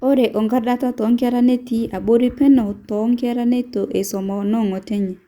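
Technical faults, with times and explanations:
No technical faults can be heard in this speech clip.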